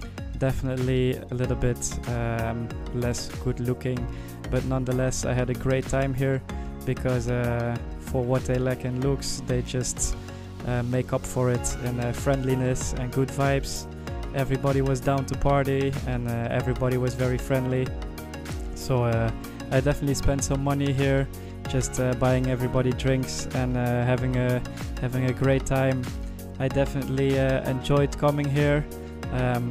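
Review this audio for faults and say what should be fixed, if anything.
Nothing needs fixing: the signal holds steady throughout, with no audible defects to trace or correct.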